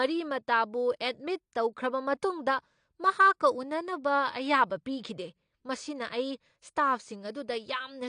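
From start to finish the speech sounds dull and smeared, with nothing above 9.8 kHz and a warbling, fizzy edge on sibilants. That's likely AAC compression at a low bitrate, something like 32 kbps, where the encoder drops the top end and starves quieter bands.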